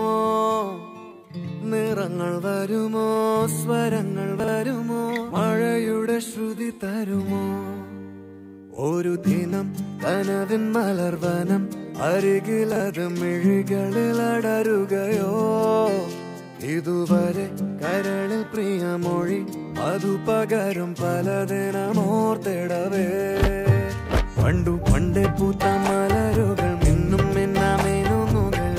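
Chunks out of order at 4.40 to 4.48 s and again at 12.72 to 12.80 s: in each 80 ms span, two 40 ms pieces of the audio play in swapped order, because one piece arrived or was written a single chunk late and landed after its successor. Nothing goes missing, but the sound briefly jumbles across three abrupt joins at each spot.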